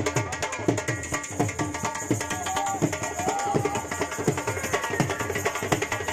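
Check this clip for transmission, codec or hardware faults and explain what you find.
No transmission, codec or hardware faults can be heard anywhere in the signal.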